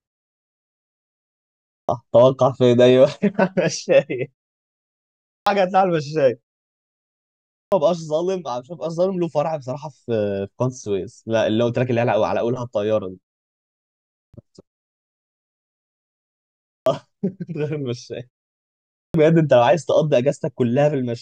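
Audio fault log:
1.4 to 19.1 s, clipped start after a pause: at 1.4, 4.93, 7.18, 13.8, 16.36 and 18.6 s, speech bursts in abruptly from silence with 0.49 to 0.54 s of its onset gone. The output device sleeps through pauses of 0.38 to 1.76 s and swallows sound while waking.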